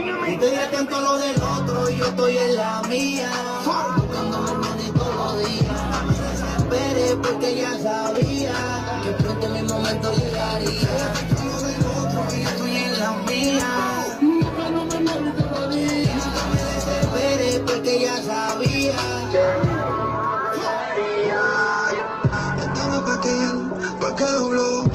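Adaptive stream at a lower bitrate, from 20.80 s to the end of the clip. The connection slowed, so the player switched to a much leaner encoding of the same stream, with no gap at the changeover. Quality drops suddenly: nothing remains above 8.2 kHz, so the treble is gone and the sound turns dull, with more codec artefacts. This fits a step down from roughly 64 kbit/s Opus to about 12 kbit/s.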